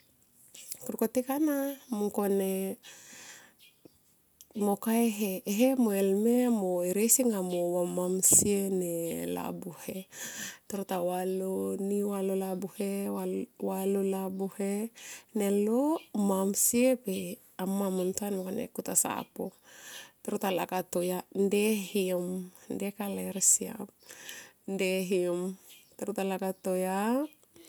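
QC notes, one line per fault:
No faults found in the speech recording. Nothing in it calls for a flagged entry.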